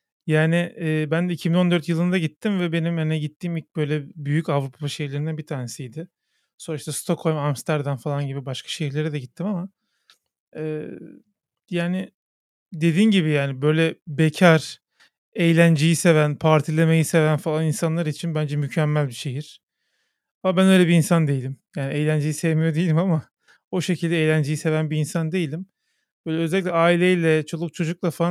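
Speech recording with no technical faults to report. Nothing in the audio points to a playback, transmission or processing problem at any point.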